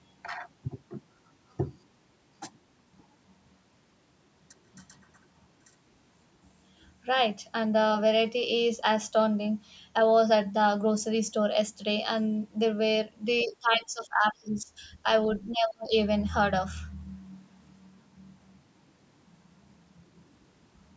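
From 13.43 to 14.87 s the speech dips by around 15 dB, then from 15.45 to 15.94 s it nearly vanishes, dropping roughly 35 dB. That's likely speech suppressed in double talk, with the echo canceller mistaking overlapping talk for echo and clamping down.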